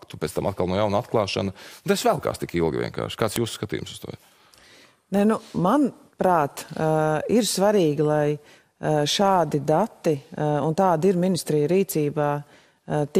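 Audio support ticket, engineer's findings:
Sharp loud click at 3.36 s, independent of the signal. File header played as audio: a joined WAV piece kept its header bytes, rendered as samples.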